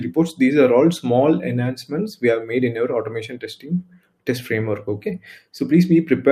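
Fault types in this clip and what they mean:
Noise suppressor applied to music or sounds: A speech-tuned noise suppressor treats sustained tones and decays as noise, so level pumps by around 10 dB throughout. On a waveform, the envelope breathes unevenly. A spectrogram shows held energy and tails thinning while attacks stay bright.
Sound cut by the noise suppressor: From 3.31 to 4.28 s, the suppressor judged this passage to be noise and pulled it down by up to about 18 dB for roughly 0.7 s. The waveform visibly shrinks there, and the spectrogram shows sustained energy fading out.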